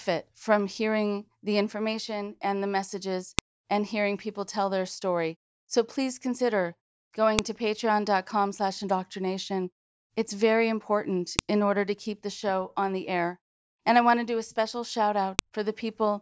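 At 3.39, 7.39, 11.39 and 15.39 s, a sharp click marks a file header played as audio: header bytes at each 4-second join, seen as a thin full-band spike.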